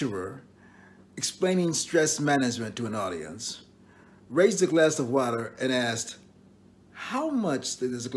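No dropouts, glitches or distortion can be heard anywhere in the clip. The sound holds steady throughout, with nothing breaking into it at any point.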